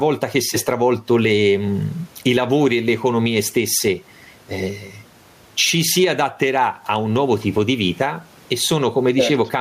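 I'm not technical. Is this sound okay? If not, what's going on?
No. Gain pumping runs throughout: loud and soft parts end up closer in level and the sound is squashed, likely because microphone gain is set too high with a fast limiter.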